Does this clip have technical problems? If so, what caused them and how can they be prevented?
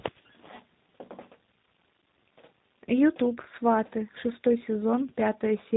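Yes. Tandem speech coding runs throughout: nothing above 3.8 kHz, rough and warbly, as what sounds like three chained speech coders, ending in one like G.729A, each re-encode the previous coder's damage. Prevent it with transcoder-free links that carry a single codec end to end.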